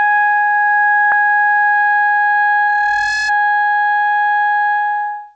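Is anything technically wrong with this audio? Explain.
Yes, two things stand out in this music clip.

Around 1.12 to 1.22 s there's a skip ahead: something like 400 ms of the music just vanishes, probably dropped in transit or flushed from an overfull jitter buffer, and playback jumps forward, stitching the two sides together with almost no gap.

From 2.67 to 3.33 s you get a loudspeaker feedback squeal at 1.7 kHz. The mic is hearing its own speaker, the loop gain tops one at that frequency, and the tone swells over about half a second to roughly 5 dB under the music.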